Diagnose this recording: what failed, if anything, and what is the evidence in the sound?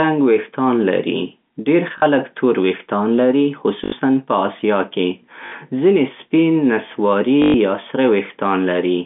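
The network stage failed: packets were lost, and the receiver filled each gap by repeating the last good packet, on a line whose narrow telephone band fits G.711 coding. Stutters occur at 1.98 to 2.02 s, between "رنګ ویښتان لري ډېر" and "تور ویښتان لري"; 3.84 to 3.92 s; 5.46 to 5.52 s, just before "ځینې سپین نسواري یا"; and 7.42 to 7.54 s, between "ځینې سپین نسواري" and "یا سره". These gaps run 40, 80, 60 and 120 ms, which fits 20 ms packets. The longer runs buzz at 50 Hz. That robotic buzz separates this fault from plain dropouts, which fall silent.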